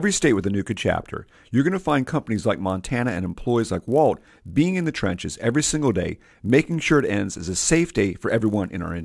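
From the start and throughout the clip, a faint buzz rides along under the speech, the sign of a resampler restarted on every block. The 48 kHz to 24 kHz conversion was run on 20 ms chunks in isolation, so each chunk edge lacks proper neighbouring samples and picks up a small error. Those errors repeat at 50 Hz and vanish in pauses. A spectrogram shows evenly spaced vertical lines every 20 ms during speech, and the waveform shows small steps at each boundary.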